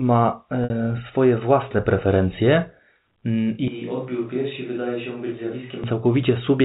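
At 0.64 s, packet loss with pitch repetition bridges about 60 ms, consistent with three lost 20 ms packets. The last pitch period loops into a brief buzzy hold just before "y swoje własne preferencje". On a spectrogram, the harmonics run frozen and flat for that stretch.

From 3.68 to 5.84 s, the sound switches to a distant microphone, likely because the close microphone's signal dropped out. It turns hollow and roomy, about 10 dB quieter, with room noise roughly 30 dB below the speech. The waveform steps down abruptly at both edges, and the spectrogram shows weaker bass and a raised noise floor. Throughout, the spectrogram shows a hard ceiling at 4 kHz, as expected from the G.711 telephone coding.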